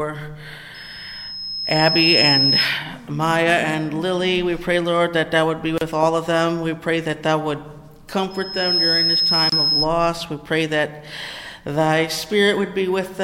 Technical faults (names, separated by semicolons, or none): gap at a join of encoded pieces; loudspeaker feedback squeal